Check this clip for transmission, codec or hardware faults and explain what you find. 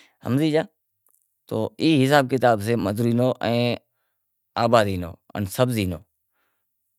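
Nothing wrong turns up here; the speech comes across without any transmission, codec or hardware problem worth pointing out.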